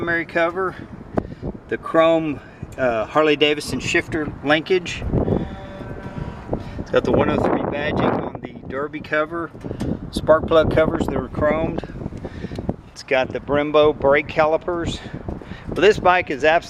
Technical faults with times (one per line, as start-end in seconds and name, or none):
none